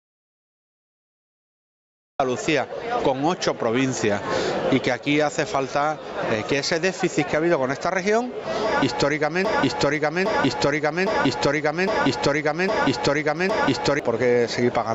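Right from the top the audio is already gone: the first 2.2 seconds are dead digital silence, with no room tone at all, and the sound only comes in mid-flow at 2.20 s. That's an audio dropout to silence. The input was likely lost for a moment, through a disconnected device, a dropped link or an accidental mute, while the recorder kept writing silence. Whatever was happening before then simply isn't there.

Once it starts, gain pumping runs through the whole clip. The level is being yanked up and down by something like 20 dB, so loud and quiet parts sit squashed close together. It sounds like the input gain was likely set far too high, with a fast limiter or compressor clamping down on each peak. The top end stops at 8 kHz, which is just the call path's normal bandwidth.

Then from 9.45 s to 14.00 s there's a broken-record loop. A fragment of about 0.81 s plays six times back to back, identical each time, so it sounds like a stuck stutter rather than anything moving forward. 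The player or stream likely stalled and kept re-sending the last chunk it had buffered, and the audio that should have filled those four and a half seconds is lost.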